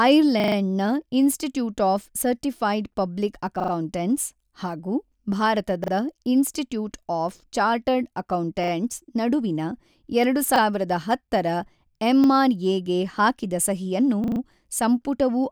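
Speech with repeated buffer stutters at 0.4, 3.6 (after "ಇನ್ಸ್ಟಿಟ್ಯೂಟ್ ಆಫ್ ಸರ್ಟಿಫೈಡ್ ಪಬ್ಲಿಕ್"), 5.84, 8.64, 10.56, 12.24 and 14.24 s. Each is a 40 ms slice replayed once to four times with hard joins, which fits a 40 ms buffer whose next block arrived late. On a waveform or spectrogram these appear as identical side-by-side blocks with vertical seams.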